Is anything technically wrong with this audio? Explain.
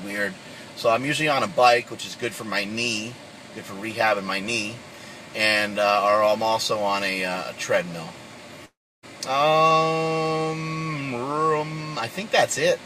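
Yes. From 8.65 s to 9.05 s there is a long network dropout. The likely cause is that incoming audio stopped arriving, and the receiver filled the gap by stretching the last sound into a fading buzz or hiss that decays to near silence for about 0.31 s. When the audio resumes, roughly 0.38 s of material is gone. A brief packet-loss glitch would last only tens of milliseconds, so the extended decay and silence here mark it as a longer outage.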